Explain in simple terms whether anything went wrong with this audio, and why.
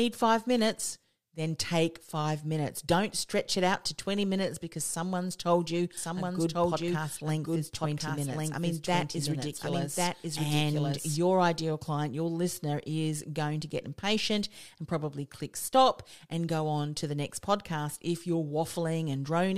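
From 5.97 s, just after "because someone's told you", until 11.17 s, before "ideal client your listener", the speech plays twice: a doubled audio track, with a second, equally loud copy about a second behind. Unlike an echo, it never fades or sounds roomy and cuts in and out abruptly, likely from a duplicated recording path.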